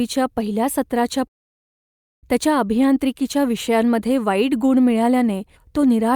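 A long network dropout runs from 1.27 to 2.26 s, close to a full second of the speech. Right at the break the last sound is stretched into a brief buzzy hiss that fades away within a few hundredths of a second, leaving near silence for most of the gap. The likely cause is a stall in the incoming stream, with the receiver concealing the hole until audio resumes at 2.26 s, skipping the missing second rather than catching it up.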